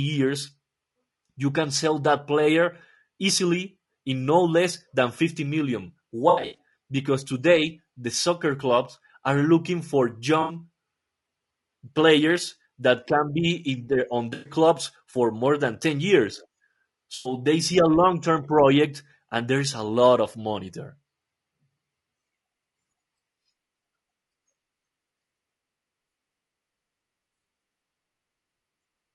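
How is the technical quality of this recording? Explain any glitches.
Technical quality is fair at best. The whole clip has a rough, grainy codec sound, and there are four short dropout glitches.

Low-delay AAC compression, likely AAC-ELD, runs throughout. Its short frames smear pitch harmonics, leaving noise between them and a thin, synthetic top end, which fits roughly 32 kbps.

AAC frame loss with concealment shows up at 6.29–6.57 s (just before "because today the soccer"), 10.41–10.55 s, 14.33–14.53 s (between "their on" and "for more than"), and 17.15–17.33 s (just before "they see a long"). In each one the decoder patches missing frames from the last good spectrum, so you hear brief smeared, noisy or phasey blips. The first is about 180 ms of loss scattered over 240 ms, with the longest run around 70 ms. The others last about 80, 120 and 100 ms.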